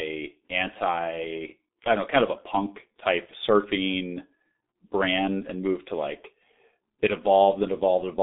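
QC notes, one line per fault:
throughout: G.723.1 codec, 6.3 kbit/s, nothing above 3.8 kHz; hoarse, muffled speech with smeared consonants from 30 ms frames, unlike clean telephone band-limiting.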